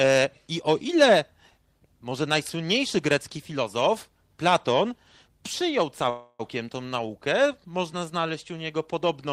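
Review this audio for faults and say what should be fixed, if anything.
A call audio freeze runs from 6.09 to 6.41 s: the sound stalls and its last moment is stretched into a fading buzz or hiss lasting about 0.3 s, then speech resumes with "tą naukę można znaleźć". This is likely a jitter buffer running dry while packets were delayed. Unlike packet loss, nothing is skipped; the speech simply continues late, pushed back by about 0.3 s. A deeper or adaptive jitter buffer and a steadier network path would prevent it.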